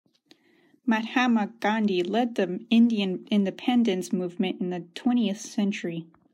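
Nothing in the recorded speech stood out as a technical fault on listening.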